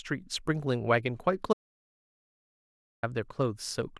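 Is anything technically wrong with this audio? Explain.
Yes. From 1.53 to 3.03 s the speech has an audio dropout to silence: the input was likely lost while recording continued, leaving about 1.5 s of silence. The sudden cut with no room tone at all sets it apart from a fade or noise gate.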